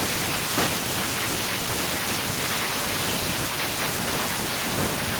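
No technical faults can be heard anywhere in the speech. Nothing in it calls for a timestamp or a diagnosis.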